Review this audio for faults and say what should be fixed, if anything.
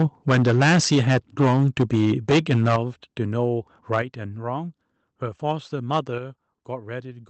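Microphone overload runs from 0.0 to 2.76 s, about 13 dB over full scale with roughly a sixth of samples clipped, and recurs at 3.93–3.99 s, about 3 dB over. The likely cause is microphone input gain set too high. The waveform shows flat-topped peaks, and the spectrogram shows broadband harsh smearing above the speech harmonics. To prevent it, set the microphone input level so the loudest speech peaks stay well below full scale.

Microphone volume stepped down at 0.02 s (about −2 dB), 2.76 s (about −7 dB), 4.02 s (about −5 dB) and 6.18 s (about −6 dB). This was likely the call software reducing device input volume after detecting clipping. The waveform envelope drops abruptly, and the spectrogram darkens at once across all bands, background included. To prevent it, start with a correct fixed input level and disable automatic microphone gain adjustment.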